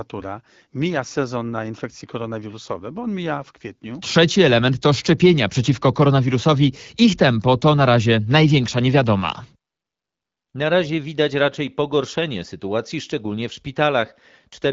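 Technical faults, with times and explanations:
No technical faults can be heard in this speech clip. It passes through an AMR wideband (HD Voice) codec working normally, and at a rate that fits 12.65 kbit/s it leaves only light coding damage, with the speech staying clear.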